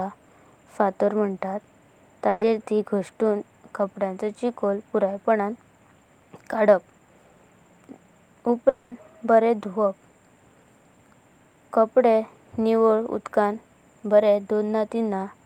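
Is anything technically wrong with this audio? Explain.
Yes, there are two network faults in this speech clip.

From 2.29 to 2.43 s there is a burst of packet loss. About 120 ms of audio never arrived, and the receiver stretched the last sound across the gap as a fading buzz or hiss. Speech then resumes past the missing part. Its short length sets it apart from a dropout.

From 8.69 to 8.93 s, just before "बारें दुवाप", 220 ms of speech is replaced by a decaying concealment tail that never settles into silence. At nearly twice the length of the earlier gap, this is likely a long network dropout rather than a brief packet burst.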